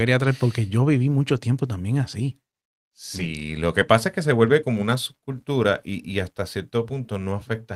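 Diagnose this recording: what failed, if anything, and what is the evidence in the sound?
Network stage, handled by the codec: a lost packet rebuilt from error correction. From 3.15 to 3.25 s, just before "lo que pasa es", the speech turns briefly rougher and grainier but never drops out. The lost audio was replaced by the low-bitrate copies carried in the following packets, about 60 ms in all, which fits three separate 20 ms frames. The waveform stays continuous, with no flat gap. On a spectrogram the stretch shows smeared, noisier harmonics.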